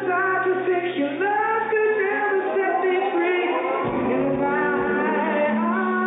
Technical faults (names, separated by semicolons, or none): none